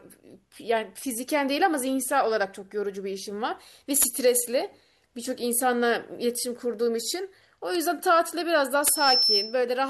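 A speech recording with two kinds of fault. Two bit error spikes land at 2.03 s and 7.75 s. Each is a single sharp tick, peaking at about -16 dBFS and unrelated to the speech. One or two samples jumped by a power of two, then returned. That points to a flipped bit in memory or on a digital link. Near the end comes a loudspeaker feedback squeal, from 8.82 s to 9.63 s. A single tone at 5.3 kHz swells over roughly a third of a second. It ends up about 5 dB above the speech. A microphone was hearing its own loudspeaker, and the loop gain passed one at that frequency.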